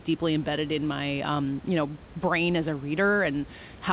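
No technical faults can be heard anywhere in the speech. The call path carries it with nothing above 4 kHz, as a G.711 mu-law link would, and the room noise sits about 24 dB below the speech.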